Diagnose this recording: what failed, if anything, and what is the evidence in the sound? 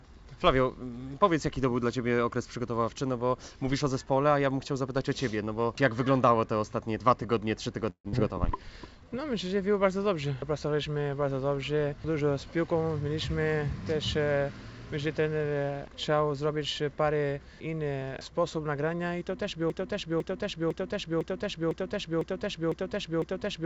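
Network stage: a long network dropout from 7.90 to 8.15 s, likely a burst of lost packets. The receiver stretched the last sound into a fading buzz for about 227 ms, then left about 80 ms of silence. Roughly 120 ms of audio never returns.

Jitter buffer stage: a jitter buffer slow-down from 8.57 to 9.32 s, as the receiver rebuilt its reserve after the gap. It repeated single pitch periods, adding 67 ms in total. The sound plays at 92% speed with unchanged pitch, and some stretches are drawn out.

Jitter buffer stage again: a jitter buffer speed-up from 12.21 to 13.40 s, after the buffer had gathered more audio than its target. The receiver cut short pitch-period pieces, roughly 100 ms in all. The passage runs at 108% speed, same pitch, and sounds hurried.

Playback or stream stage: a broken-record loop from 19.7 s to the end, likely a stalled player or stream resending the last fragment it held. 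A 0.50 s piece repeats exactly eight times back to back, and the audio that belonged there is gone.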